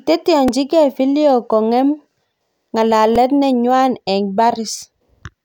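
Speech, with a repeated buffer fault at 0.48 s and 3.16 s. A tiny 2.67 ms piece plays three times, heard as a brief buzz. That fits a 128-sample buffer. Nothing seems lost.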